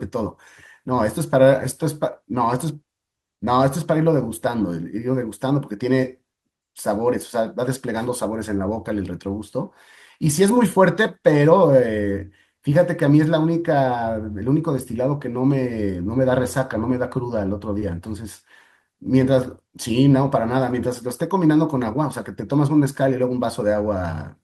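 Speech recording with a short concealed packet loss at 17.79–17.83 s: 20 ms never arrived and was filled by extending the preceding sound, leaving a brief smear rather than a silent gap.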